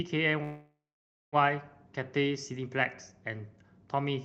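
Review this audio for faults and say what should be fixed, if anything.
From 0.43 s to 1.36 s the speech stalls. The last sound stretches into a fading buzz or hiss that sinks into about 0.56 s of near-silence, then the talk resumes exactly where it stopped, with nothing skipped. This call audio freeze was likely caused by packets held up in transit, draining the jitter buffer. The receiver filled roughly 0.9 s with concealment, so that delay was inserted rather than audio lost, all within the Opus call path, whose band reaches up to 8 kHz. Preventing it means stabilising the network route or allowing the jitter buffer more headroom, so that brief delivery stalls are absorbed without playback running dry.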